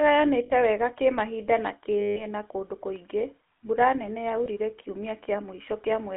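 Throughout, the speech carries GSM full-rate codec damage. The line passes only about 250 Hz to 3.4 kHz. The codec rebuilds the voice from a vocal-tract model driven by sparse pulses, which fits a 13 kbps full-rate stream. The result is a plainly audible buzzy, gravelly roughness.

Lost GSM frames break in three times. The first is at 0.46 to 0.51 s, a gap of about 40 ms. The second, at 2.00 to 2.25 s, lasts about 160 ms. The last is at 4.44 to 4.47 s, about 20 ms. Each time, the decoder repeats the last good frame's settings. This holds the sound as a rough, metallic ring. The long middle gap rings before the speech returns.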